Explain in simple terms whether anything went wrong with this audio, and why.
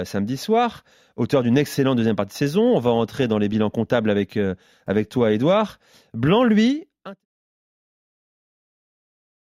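Nothing went wrong; the speech simply fades out gently.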